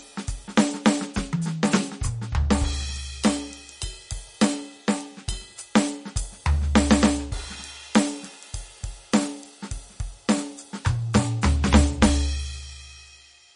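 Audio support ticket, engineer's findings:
Throughout: plainly audible watery, swirly artefacts in the music, nothing above 10.6 kHz. Likely MP3 compression, consistent with about 40 kbps. Starved encoder drops weak lines frame to frame and cuts treble.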